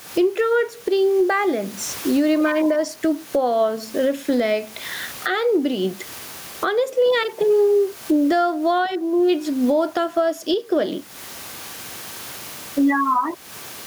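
Gain pumping throughout the speech: the gain swings around 20 dB, likely from excessive gain driving a fast limiter.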